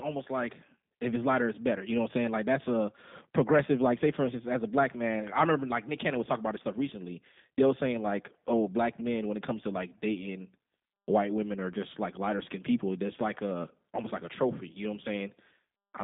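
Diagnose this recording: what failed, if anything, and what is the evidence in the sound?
The speech passed through a low-bitrate codec at the coding stage. Throughout the recording it sounds rough and synthetic, consistent with the G.729 codec. The codec rebuilds each 10 ms frame from a vocal-tract filter, pitch predictor and sparse pulses. Energy sits between 150 Hz and 3.7 kHz, with nothing above 3.8 kHz, which fits an 8 kbit/s G.729A stream.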